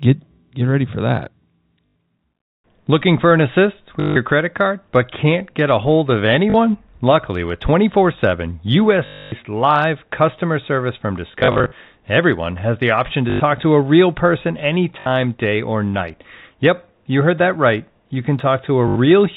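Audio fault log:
1.86–1.95, 4.00–4.16, 6.50–6.54, 9.06–9.32, 11.28–11.72, 13.30–13.40, 15.00–15.06 and 18.88–18.96 s: packet loss with last packet repeated. The speech breaks into short robotic stutters with a 50 Hz buzz. The longest is at 9.06 s, and the one after "customer service from" is broken into scattered bits. The receiver replayed the previous packet to fill each gap, which fits 20 ms packets. The replayed copies seldom line up with the pitch at the joins.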